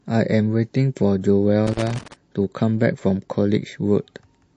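MP3 compression damage is plainly audible throughout this speech, with dulled treble and a watery, swirling quality on sibilants, likely from an encoder starved of bits, which fits a bitrate around 40 kbps. Loose connector crackle breaks in from 1.67 to 2.14 s as an irregular scratchy burst, where an intermittent contact repeatedly chops the signal.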